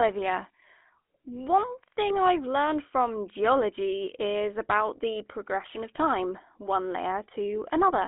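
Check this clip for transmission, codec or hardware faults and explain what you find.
Two faults are audible: a codec colouring the whole clip and one brief burst of transmission damage.

Throughout, the speech sounds buzzy and gravelly, confined to roughly 250 Hz to 3.4 kHz. This is the GSM full-rate codec, which rebuilds speech from a pulse-driven vocal-tract model; the result fits a 13 kbps stream.

From 5.95 to 5.98 s, a short squawk and gargle break through. These are GSM bit errors: corrupted filter, pitch or gain values distort the decoder output, consistent with about three damaged frames.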